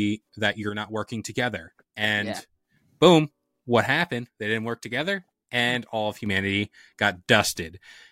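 Speech with two abrupt level drops of about 6 dB, 0.69–2.76 s (ending before "boom what") and 3.86–6.26 s, likely one channel dropping out before the mono sum.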